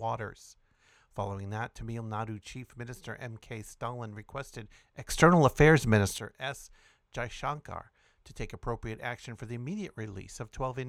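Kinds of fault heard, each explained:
Sudden gain jump, 5.09 to 6.18 s: the speech and its background noise leap together by about 14 dB with no ramp, hold there, then drop back. This is likely a digital gain setting applied instantly from one sample to the next.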